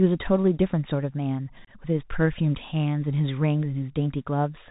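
A speech clip, heard through a Bluetooth CVSD headset codec throughout. Nothing passes above 4 kHz, s sounds turn scratchy, and a granular hiss sits underneath, consistent with a 64 kbps link. At 1.65 to 1.70 s comes unconcealed Bluetooth headset packet loss. About 26 ms of audio drops out as hard-edged holes, pointing to several lost packets, and the speech returns briefly quieter.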